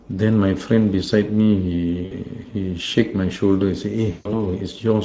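Speech runs through the Speex codec for the whole clip. Its damage is plainly audible. Voices sound noisy and hoarse. The grain fits a middle setting near 17 kbps. VoIP packet loss concealed by the speech codec hits twice. From 2.05 to 2.15 s, about 60 ms goes missing, which fits three lost 20 ms frames. From 4.11 to 4.43 s, about 140 ms goes missing. Each time, the decoder stretches its last sound into a buzzy tone or coloured noise that fades. Because each frame builds on the one before, the voice stays weak or distorted briefly after the loss.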